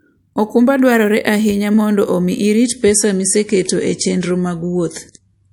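At 2.64 s the speech abruptly loses its top end, with nothing above 11.5 kHz, and turns swirly and metallic through to the end, with no gap at the switch. This is an adaptive stream at a lower bitrate, consistent with MP3 dropping from around 128 to 48 kbit/s.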